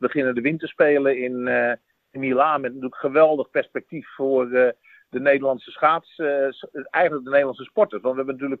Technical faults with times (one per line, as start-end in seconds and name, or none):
none